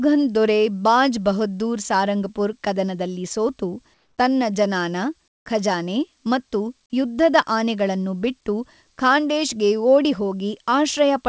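At 3.94 to 4.18 s and again at 5.28 to 5.46 s, the real background between speech is replaced by comfort noise: steady, featureless hiss, about 3 dB quieter the first time and about 18 dB quieter the second, likely because discontinuous transmission stopped the sender during the pauses.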